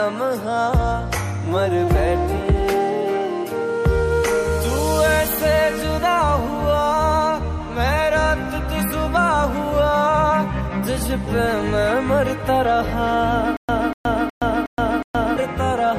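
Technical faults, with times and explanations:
13.57–15.37 s, stutter with silent gaps: a likely playback or stream stall made each retry replay the same 244 ms fragment, then drop to digital silence for about 121 ms. The burst returns every 365 ms, five times, and the audio due in that span is lost.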